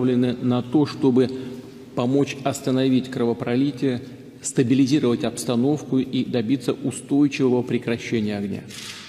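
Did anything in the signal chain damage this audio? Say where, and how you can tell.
No, nothing in the signal chain damaged this audio.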